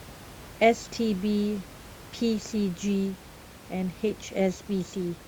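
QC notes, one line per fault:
No faults to note.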